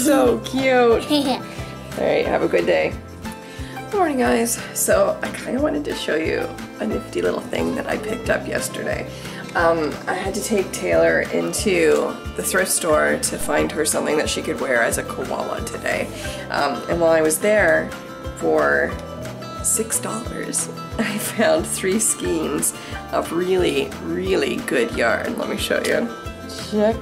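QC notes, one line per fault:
13.41 s, DC step: the waveform's zero line jumps abruptly by about -21 dBFS, and the sound carries on unchanged around the new baseline. The sudden offset is heard as a single low thump. A 2 Hz high-pass pulls it back, so the offset decays over roughly a tenth of a second. On the waveform the trace lurches off centre and curves back. The spectrogram shows a brief broadband vertical stripe, strongest at the lowest frequencies.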